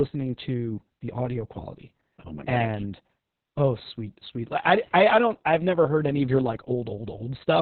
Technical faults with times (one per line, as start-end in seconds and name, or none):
0.00-7.62 Opus voice compression